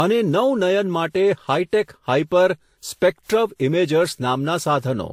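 Throughout the speech, the top end stops dead at about 16.6 kHz, and two different kinds of compression damage sit on top of each other. This points to transcoding between lossy codecs, likely a WMA encode at around 96 kbit/s later re-encoded as Vorbis at about 44 kbit/s. The second encoder spends its scarce bits on the first encoder's artefacts and adds its own. A single low-bitrate pass would give only one consistent flavour of artefact, not this layered mix.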